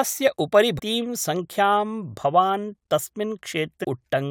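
Damaged data in a compressed stream breaks up this speech recording twice: corrupted bytes in the encoded file make the decoder misread frames and lose sync while hunting for the next valid header, producing brief disruptions at 0.78–0.80 s and 3.83–3.85 s.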